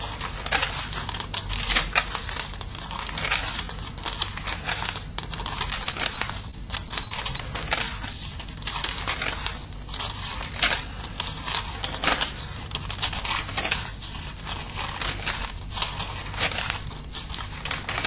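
From 5.84 to 7.40 s the sound turns choppy, with small pieces dropping out over roughly a second and a half. This is repeated packet loss: eight short gaps, the longest 28 ms, about 160 ms missing in total, each patched by stretching the preceding audio, so around 9% of that stretch is filled-in sound. The G.711 call path leaves nothing above 4 kHz.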